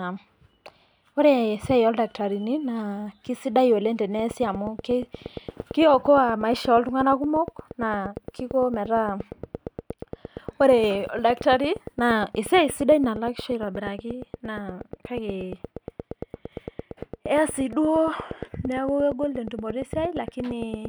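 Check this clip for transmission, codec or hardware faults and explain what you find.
There's one real problem: a train of clicks running from 4.19 s right through to the end at 20.86 s. It's a steady tick at about 8.6 per second, evenly spaced, so around 150 near-identical pulses, peaking a few dB above the speech itself. That regularity points to something periodic, likely interference from nearby gear or a faulty connection or power supply. You hear it as persistent ticking over the speech and straight through the pauses.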